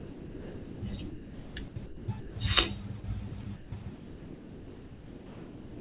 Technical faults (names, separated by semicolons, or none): sound dropped by the voice detector; sound chopped by the voice detector